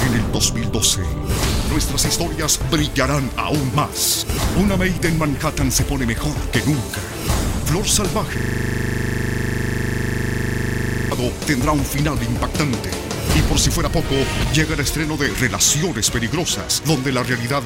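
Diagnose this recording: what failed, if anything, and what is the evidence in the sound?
The failure is a system hang loop at the driver or buffer stage. From 8.38 to 11.12 s the audio stops moving forward. One 40 ms slice repeats exactly, close to 70 times. That gives a rough, rattling buzz at 25 Hz. The mechanism is a frozen computer or driver. The sound hardware kept reading the same ring buffer. The repeat length fits a buffer of about 40 ms.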